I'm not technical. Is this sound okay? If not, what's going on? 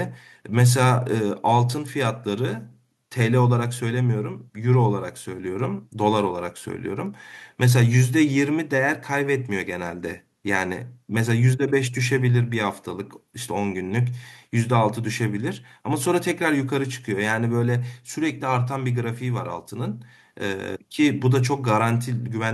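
No. At about 7.06 seconds there is a single sharp snap, a click-like crack that sits on top of the speech for only an instant. This is an electrical switching spike. It is most likely caused by something electrical nearby, such as a switch being flipped, a motor starting, or a spark of static, sending a brief burst of electrical noise into the audio cable or equipment, which the recording picked up as that snap.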